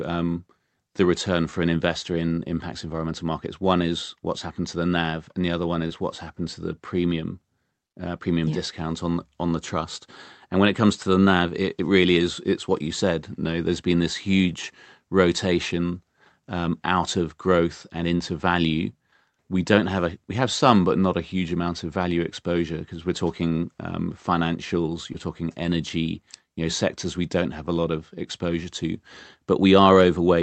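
Short concealed packet loss occurs at 5.87–5.92 s after "and the other one", at 18.18–18.21 s after "out of growth and", and at 25.13–25.16 s before "talking energy". Each time, a few hundredths of a second of the call arrived too late, and the receiver bridged the gap by extending the preceding sound. The result is a brief smear or wobble rather than the hard silent gap of a plain dropout. The Opus call path, cut off at about 8 kHz, carries these fills.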